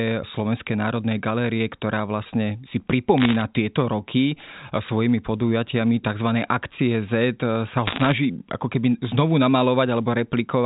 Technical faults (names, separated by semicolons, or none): bit errors on a digital phone line